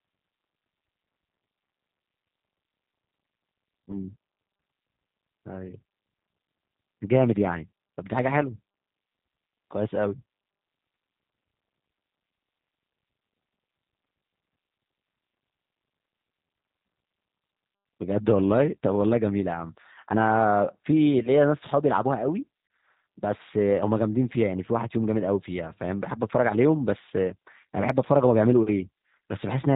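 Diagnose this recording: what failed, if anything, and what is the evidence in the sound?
The failure is at the codec stage. A G.729 codec is audible from start to finish. Nothing above 4 kHz survives, so the speech sounds narrow and muffled. Voiced sounds carry a rough, slightly synthetic buzz. The coder does not keep the waveform. It rebuilds each 10 ms frame from a vocal tract filter, a pitch predictor and a few pulses. That sparse rebuild fits an 8 kbit/s stream.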